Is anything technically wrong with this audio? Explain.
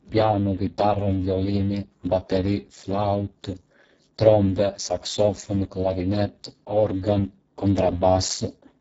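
Yes. Throughout the speech, the sound is hoarse, grainy and buzzy, with a robotic edge, and nothing is present above 7.7 kHz. This is heavy Speex codec damage. The CELP coder is starved of bits for the excitation signal, which fits a very low bitrate of roughly 6 kbps, so it models the voice coarsely and fills in with noise. The upper band is a thin, noise-like wash rather than real detail.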